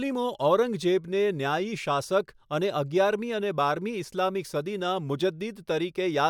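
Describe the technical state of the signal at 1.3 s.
At 1.3 s the speech signal is intact, with no dropout, clipping, distortion or other technical fault to be heard at that point.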